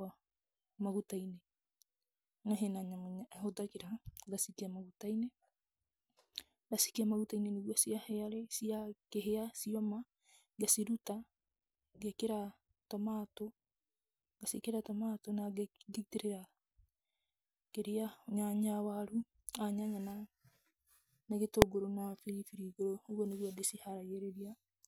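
At 21.62 s, invalid numbers at full scale: a calculation produced infinite or invalid values for a 0.73 ms block, clamped to full scale and heard as one sharp bang.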